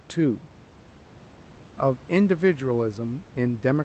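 Nothing goes wrong anywhere in this speech; it comes through an ordinary call connection with that connection's usual coding character, and the faint room noise about 27 dB beneath it is simply part of the recording.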